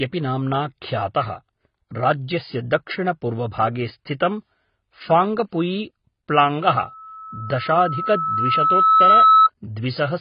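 Speech runs the full clip with a dull, smeared tone and nothing above 5.1 kHz. Sibilants sound fizzy and warbling. Heavy compression damage like this likely comes from AAC compression, and it fits an AAC-LC stream at about 16 kbps. From 6.81 to 9.49 s, a loudspeaker feedback squeal appears. It is a single 1.3 kHz tone. A microphone picks up its own loudspeaker, and the loop gain at that frequency exceeds one. The tone builds over roughly two seconds and peaks about 10 dB above the speech.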